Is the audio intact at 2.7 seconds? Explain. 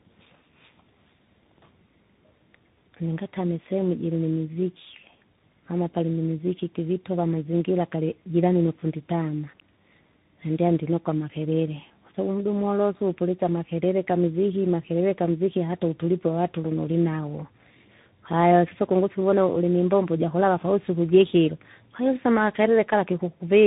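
No. At 2.7 seconds, as through the whole clip, the speech sounds rough, muffled and warbly, with nothing above about 3.8 kHz. This is tandem speech coding: the call seems to have crossed links with different codecs, likely an 8 kbit/s G.729A stage followed, after a G.711 hop, by CVSD. At each border the audio was decoded and re-encoded, so each coder compressed an already degraded signal and the damage built up.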